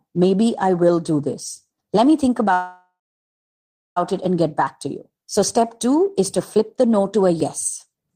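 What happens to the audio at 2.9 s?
A call audio freeze runs from 2.53 to 3.98 s. The last sound smears into a fading buzz, then about a second of silence. Delayed packets likely emptied the jitter buffer. The audio then resumes where it stopped, with nothing lost.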